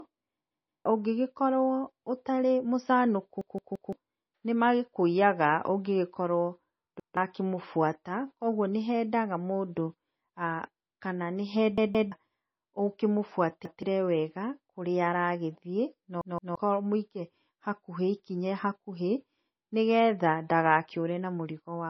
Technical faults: low-bitrate audio saved at a high bitrate; repeated buffer

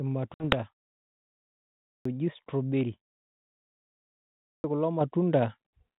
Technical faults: packet loss on an ADPCM call; clipped start after a pause; microphone volume stepped up

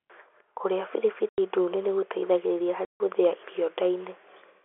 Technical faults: packet loss filled with silence; phantom power thump

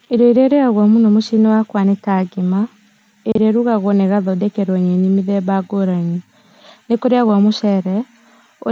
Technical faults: none

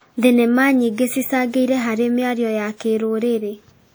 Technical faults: WMA compression

